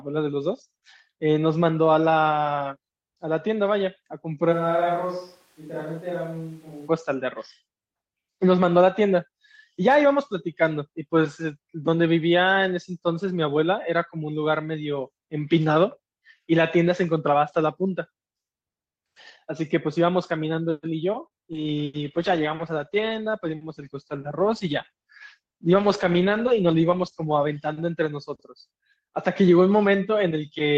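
From 4.54 to 6.87 s the sound abruptly turns roomy and hollow, with thinner bass, a level about 5 dB lower, and room noise sitting only some 35 dB below the speech. It snaps back just as suddenly. This is most consistent with a switch to a distant microphone, the likely cause being that the close microphone's feed dropped out and a more remote pickup filled in for just over two seconds.

At 21.27 s a short stall from a late packet holds the sound for about 34 ms. A packet missed its playout time, the jitter buffer drained, and the receiver stretched the last sound for 34 ms until the packet arrived. Playback then resumed from the same point, so nothing is lost, but the sound hangs briefly with a slight buzz or dip, and all later audio runs 34 ms later.

About 0.2 s later, at 21.53 s, there is a short concealed packet loss. Roughly 20 ms of audio never reached the decoder, and the receiver covered the gap by extending the preceding sound for 12 ms before blending back into real audio. 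It comes across as a quick smear or wobble, and since part of the gap is simply missing, the sound at that point is slightly clipped short.

From 21.98 s to 28.42 s a call bitrate drop takes the encoder from 32 kbps down to 14 kbps, with the lowest rate held for about 5.2 s. With under half the bits, Opus quantises more coarsely and narrows the top end, so the sound becomes rough, watery and muffled. It clears once the bandwidth estimate recovers and the rate climbs back.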